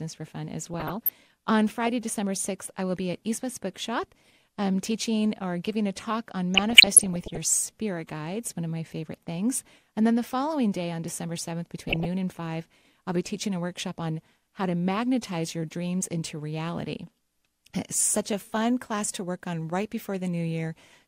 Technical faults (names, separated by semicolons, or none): DAB burbling